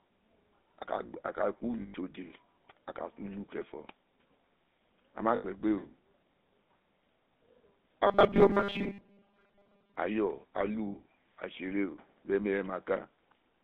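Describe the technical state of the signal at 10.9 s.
A rough, metallic ring holds the sound from 10.88 to 10.95 s. These are lost GSM frames: the decoder repeated the last good frame's settings over about 60 ms, which fits three 20 ms frames.

Underneath, the sound is buzzy and gravelly, confined to roughly 200 Hz to 3.7 kHz. That is plainly audible GSM full-rate codec damage, consistent with 13 kbps coding, where the excitation is rebuilt from sparse regular pulses.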